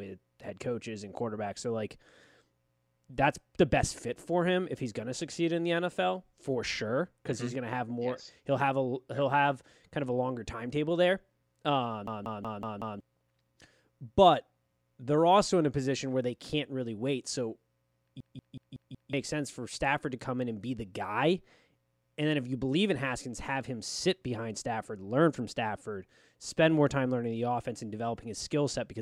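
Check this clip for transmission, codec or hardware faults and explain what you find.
There are two faults, both system hang loops. The first runs from 12.07 to 13.00 s, right after "longer timetable there um". The second runs from 18.20 to 19.13 s, just before "sense for". Each time the system froze while the hardware kept replaying one 186 ms ring buffer, which fits an 8192-sample buffer. The buffer repeats five times at 5.4 Hz, a machine-gun stutter that replaces about a second of speech. The waveform shows identical repeating blocks, and the spectrogram shows a regular pattern with sharp vertical seams.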